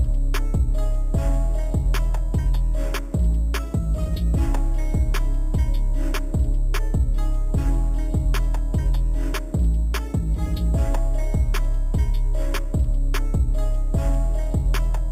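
Throughout the clip there is imaging from sample-and-hold upsampling, which fits an 8 kHz source raised to 44.1 kHz by repeating samples without filtering. Mirrored images fill the 4 to 8 kHz band at about 27 dB below the signal, giving a metallic fizz that tracks the sound's level.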